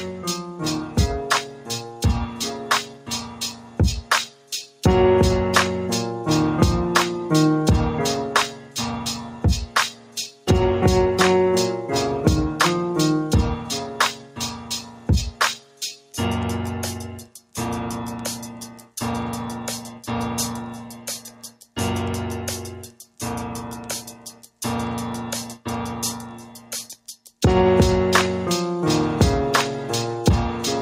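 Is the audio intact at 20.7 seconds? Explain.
No. From 19.91 to 21.77 s the audio suffers a sound cut by the noise suppressor, dipping by about 11 dB at its deepest, with roughly a second of that span audibly pulled down. The suppressor judged this sound to be noise and attenuated it, so held portions sink and fading tails end early while any sharp onsets still poke through. That distinguishes it from a dropout or packet loss: the signal never vanishes outright, and the level sags rather than gapping.

That moment also sits within a noise suppressor applied to music or sounds, which runs through the whole clip. A speech-oriented denoiser is treating steady tones, ambience and reverb as background and riding them down by around 10 dB, giving a pumping, fluttering, thinned character. Unlike a compressor's pumping, which follows loudness, this follows how steady the sound is: attacks survive and sustains are what get ducked.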